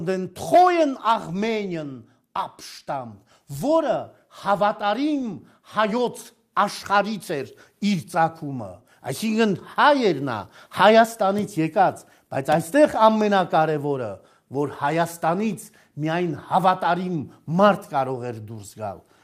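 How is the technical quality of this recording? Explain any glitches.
No technical faults are audible.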